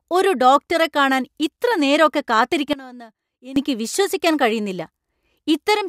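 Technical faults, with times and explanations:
2.73 to 3.56 s, sudden gain jump: the speech and the background noise beneath it drop together by about 19 dB at one instant and come back just as abruptly at 3.56 s. The likely cause is a digital gain setting applied from one sample to the next with no ramp. Unlike a dropout, the sound continues at a lower level rather than vanishing, and unlike compressor pumping, the noise floor steps down with it instead of swelling between syllables.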